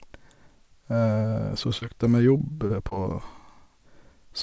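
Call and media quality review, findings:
Short concealed packet loss at 1.80, 2.37, 2.67 and 2.89 s: brief smears lasting about 35 to 42 ms each. Each gap fits one lost 20 ms packet. The jitter buffer's concealment extended the preceding speech for 15 to 22 ms, then crossfaded back. Audio is band-limited to 8 kHz, consistent with G.722 at 64 kbps.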